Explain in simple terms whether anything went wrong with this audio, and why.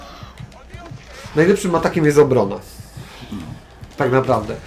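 Listening closely turned up nothing that sounded wrong with this audio.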